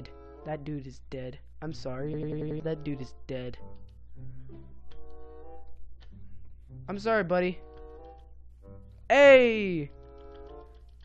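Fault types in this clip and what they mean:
System hang loop: machine-gun stutter from 2.14 to 2.60 s, a 93 ms slice repeating five times while the frozen system kept cycling its audio buffer.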